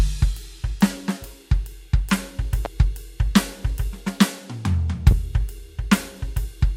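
A short piece of music with two loud pops cutting through it, one at 2.65 to 2.68 s and a bigger one at 5.11 to 5.14 s. Each is a single sharp hit, roughly 10 dB above the music for the first and closer to 15 dB for the second, with the music carrying on unbroken underneath. That sudden pulse riding on top is most likely a voltage spike getting into the chain, from a plug, a switch, static or a driver glitch.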